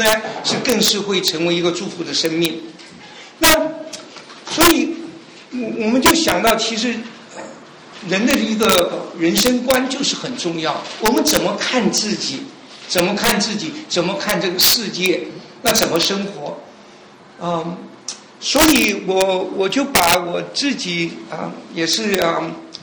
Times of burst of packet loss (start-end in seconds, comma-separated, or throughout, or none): none